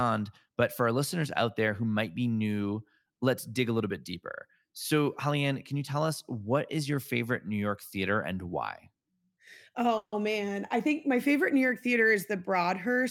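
A speech clip with a call audio freeze from 9.97 to 10.14 s. The last sound is stretched into a fading buzz or hiss that drops to silence for about 60 ms, about 150 ms of fill in all, and the speech resumes exactly where it stopped. The likely cause is delayed packets draining the jitter buffer. What distinguishes it from a packet-loss dropout is that no speech is skipped. A gap is inserted instead, so everything after it runs 150 ms later.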